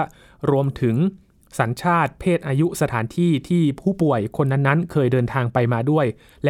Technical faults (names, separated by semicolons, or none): none